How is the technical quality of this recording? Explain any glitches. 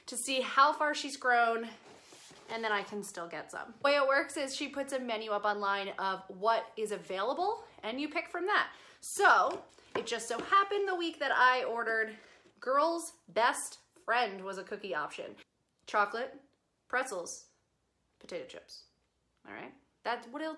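No glitches detected; the recording holds steady throughout with nothing audible to flag.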